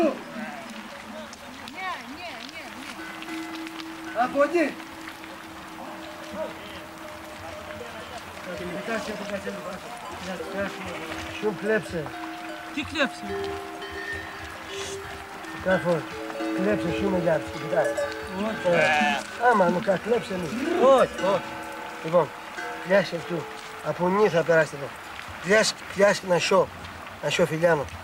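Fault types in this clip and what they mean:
No faults can be heard.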